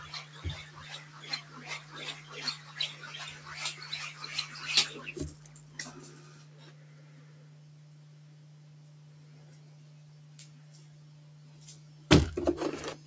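Throughout, a speech noise suppressor is applied to these sounds. Held tones and tails sink by about 10 dB, so the audio pumps and thins.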